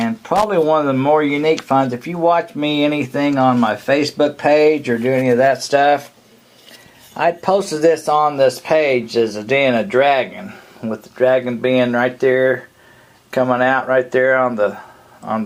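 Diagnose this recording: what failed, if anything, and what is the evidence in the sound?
A short, irregular burst of crackle and scratching cuts into the sound from 0.36 to 0.44 s, lasting about 80 ms. This is loose connector crackle, a failure in the analogue wiring: a worn or dirty contact in a plug or jack made and broke in quick succession as it shifted, chopping the signal on and off. Any DC present on the line adds pops within the burst.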